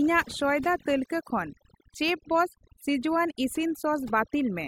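Throughout, overdone noise removal has suppressed bands near the noise estimate too hard, leaving near-silent gaps with twinkling specks.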